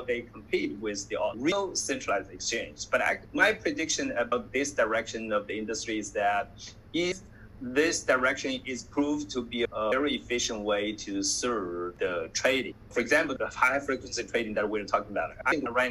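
Audio missing between chunks is heard at 1.52, 4.32, 7.12, 9.92 and 15.52 s: each time the sound jumps forward abruptly, with no silence and no fade. The two sides are butted straight together, so the material simply lurches ahead. About a fifth of a second seems to drop out at each join. The skips fall on a regular 2.8 s grid, so the likely cause is a recorder or processor working in 3 s blocks that loses a short stretch at each handover.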